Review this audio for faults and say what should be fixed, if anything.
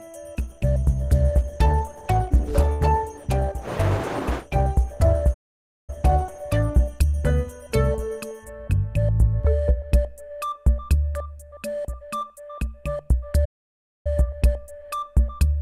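From 0.39 s to 9.10 s the sound turns rough, watery and muffled: a call bitrate drop from 64 to 14 kbps made the encoder code coarsely and cut high frequencies, bottoming out for 4.8 s.

The audio cuts to silence at 5.33 s for 0.54 s and at 13.45 s for 0.60 s. These are playback stalls, likely from the player running dry or its thread being blocked.

To prevent these, give the sender a steadier bandwidth estimate with a higher bitrate floor, and enlarge the playback buffer while keeping the audio thread unblocked.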